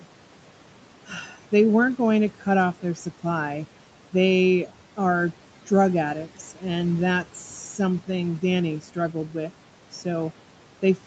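Across the whole clip the background noise sinks away in the gaps between phrases and rises again beneath the speech, by about 12 dB. These are noise suppressor artifacts: the suppressor estimates the steady room noise, which sits about 19 dB below the speech, and turns down each frequency band it judges to be noise, frame by frame, so the noise floor follows the talker's activity. Nothing is heard above 8 kHz, which fits the call microphone processing and an Opus path at that bandwidth.

From 1.07 to 1.36 s, and again from 9.13 to 9.51 s, parts of the speech drop away and sound swallowed, by about 9 dB in the first stretch and about 8 dB in the second. This is speech cut by the noise suppressor, which mistook low-level parts of the speech for background and turned them down with it. In each stretch only some of the sound is affected, roughly 150 ms in the first and 100 ms in the second.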